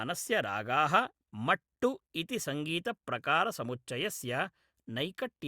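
Nothing in this speech recording stands out as a technical fault, so there's no problem to point to at any moment along the way.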